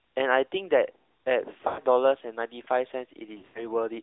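A thin, boxed-in sound with a buzzy, synthetic edge runs through the whole speech clip, confined to roughly 300 Hz to 3.7 kHz. This is the AMR narrowband mobile codec: a vocal-tract model driven by sparse pulses, with damage plainly audible at a rate that fits a mid-rate mode near 10 kbps.

From 1.68 to 1.80 s the speech smears, drawn out and sagging in level before recovering rough for a moment. From 3.38 to 3.69 s it warbles and dips repeatedly, with the longest dropout about 80 ms. These are lost AMR speech frames: the decoder repeated its last good pitch and vocal-tract settings at falling gain.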